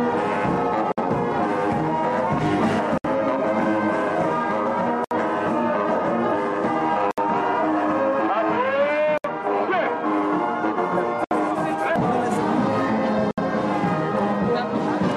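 Short silences, a gap at a join of encoded pieces, open at 0.92, 2.98, 5.04, 7.11, 9.18, 11.24 and 13.31 s, about 57 ms then 67 ms each, after every 2 s of sound. Unlike dropouts, nothing is lost: encoder padding was left in, and the sound resumes exactly where it stopped.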